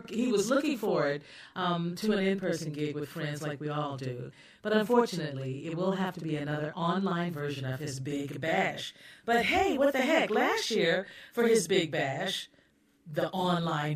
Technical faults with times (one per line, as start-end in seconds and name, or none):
0.00-13.96 channel delay (doubling)